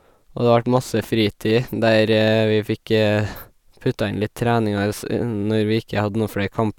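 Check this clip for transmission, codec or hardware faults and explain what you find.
Nothing in the speech points to a transmission, codec or hardware fault.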